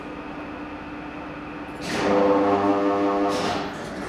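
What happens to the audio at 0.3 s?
Nothing goes wrong at 0.3 s; the sound plays through that moment intact, with no audible fault.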